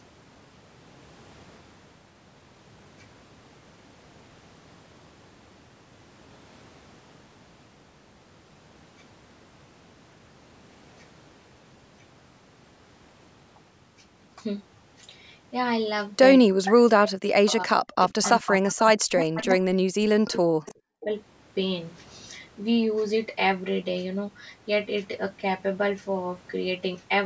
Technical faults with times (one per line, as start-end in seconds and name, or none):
16.94-21.09 speech suppressed in double talk
18.24-18.52 echo leak
19.38-19.44 echo leak
20.66-20.74 echo leak